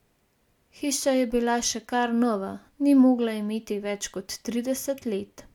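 A speech recording whose signal shows no audible technical fault at any point.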